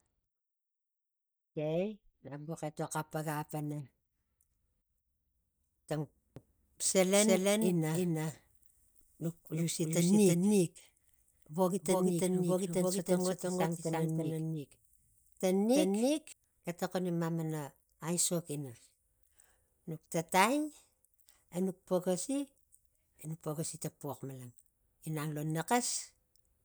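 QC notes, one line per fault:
6.36–16.32 s doubled audio track: speech repeats as a dry copy about 300 ms behind at similar level, cutting in and out abruptly; likely a slower second capture path.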